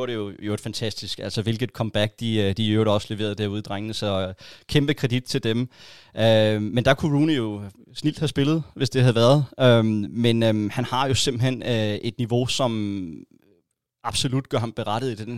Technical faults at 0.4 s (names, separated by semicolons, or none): none